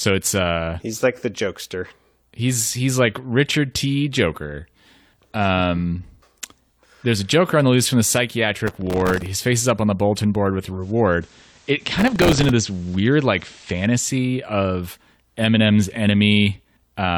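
From 8.67 to 9.26 s, just before "face is up on", the processor falls behind and misses dozens of buffer deadlines in a row. The short, tightly spaced defects suggest a very small buffer of about 1.5 ms. Each missed buffer replays a sliver of old audio with hard edges, so the speech picks up a gritty processor overload crackle that stops once the load eases.

At 10.69 s, right after "bulletin board with a", the receiver loses the digital stream and shows digital radio blending to analogue, cross-fading to the FM broadcast over 231 ms. The loudness stays the same, but a faint hiss rises, roughly 35 dB below the speech. The FM sound continues until 14.16 s, when it blends back to digital.

Within that FM stretch, from 11.99 to 12.49 s, a second burst of the same overload crackle tears through the sound.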